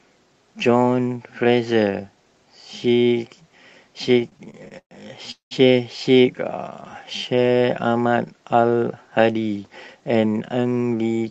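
From 4.19 to 4.93 s the speech drags and stutters, with nine short stalls in which the last sound is held, the longest about 119 ms, together about 255 ms, roughly a third of that span. These are repeated stalls (stutter): packets arrived late, the jitter buffer kept running empty, and the receiver stretched the last sound each time before resuming, so nothing is lost.

At 5.31 s the sound suddenly hangs as a continuation of the last sound that fades into about 130 ms of silence before picking up again at 5.53 s, having put roughly 200 ms into the timeline. This is a call audio freeze, likely caused by packets being held up in transit until the jitter buffer emptied.

From 6.36 to 7.80 s the speech runs slow, at about 88% speed but the same pitch, with drawn-out sounds. This is a jitter buffer slow-down: to rebuild its reserve, the receiver repeated single pitch periods and bits of pauses, adding about 176 ms.

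From 9.73 to 10.94 s the speech turns hurried, at about 111% speed with unchanged pitch. This is a jitter buffer speed-up: holding more audio than its target, the receiver cut out short pieces one or a few pitch periods long, around 150 ms in total. Throughout, the band stops at 8 kHz, which fits Opus at 32 kbps on the call path.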